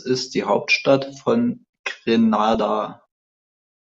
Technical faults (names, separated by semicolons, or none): DAB burbling